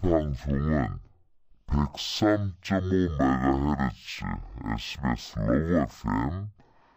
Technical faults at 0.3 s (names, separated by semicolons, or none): stereo read as mono